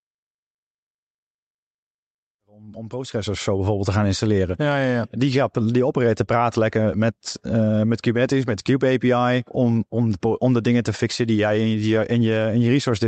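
Nothing to worry about here; the speech just eases in with a gentle fade that settles by about 3.9 s, and the call-codec treatment, which tops out around 8 kHz, is simply how it came through rather than anything going wrong.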